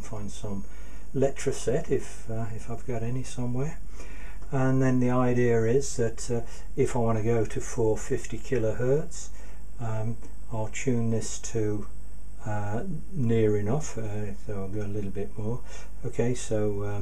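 No technical faults can be heard anywhere in this audio.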